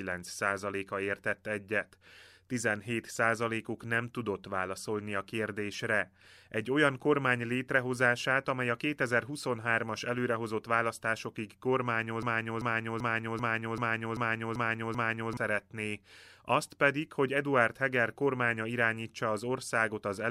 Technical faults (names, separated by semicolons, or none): broken-record loop